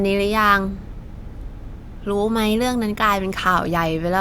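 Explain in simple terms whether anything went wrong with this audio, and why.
Nothing went wrong here: the speech holds steady throughout, with no gaps, clicks, distortion or sudden changes in level that would point to a technical problem.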